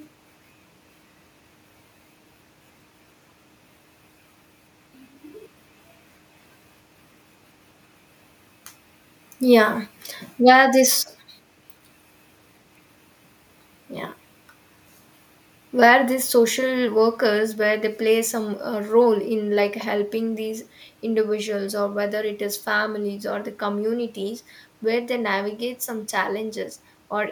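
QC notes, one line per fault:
No faults found on this recording.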